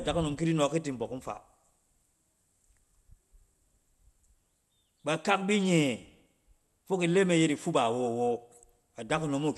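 Throughout, the speech sounds dull and gurgly, with nothing above 12.1 kHz. That's likely MP2 compression starving its upper sub-bands, and it fits 80 kbps.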